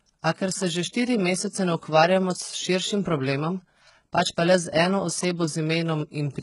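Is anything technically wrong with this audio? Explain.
Yes. Throughout the speech, the s sounds come out gritty and lispy, with a metallic sheen, and nothing is present above about 11.1 kHz. This is likely HE-AAC compression at a very low bitrate, around 12 kbps, where the treble is rebuilt by copying lower bands upward rather than coded directly.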